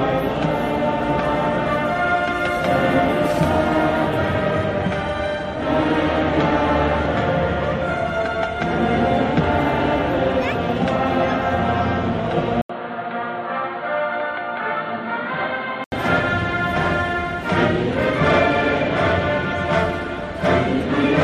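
At 12.61 s a short gap of about 80 ms opens, then the sound turns dull and boxy, with nothing above 4.6 kHz, drops about 5 dB, and carries a faint new noise floor until 15.92 s. This points to an input switched to a poorer device, likely.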